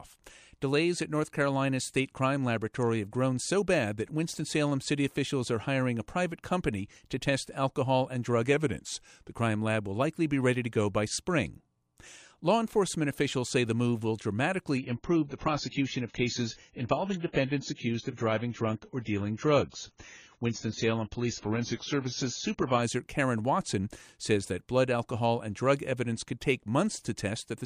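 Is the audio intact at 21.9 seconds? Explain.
No. At 21.9 s two faults overlap. The adaptive stream at a lower bitrate runs from 14.78 to 22.82 s. The stream switches abruptly to a much leaner encoding, consistent with a fall from 96 to about 16 kbit/s AAC, and everything above 7 kHz vanishes, leaving the speech dull and watery. Unlike a dropout, there is no gap.

From 21.45 to 22.20 s the speech also slows by 5.95% and drops about 106 cents, just over a semitone. It then snaps back. This is likely a drift correction step. It differs from wow because the shift is one steady step rather than a wavering.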